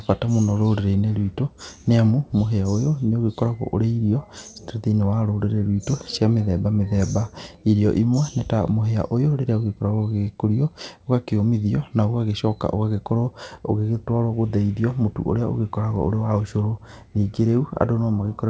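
Speech over a call line, with no faults heard.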